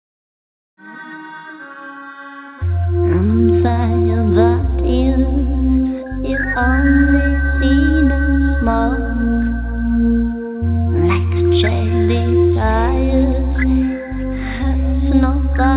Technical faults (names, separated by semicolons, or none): none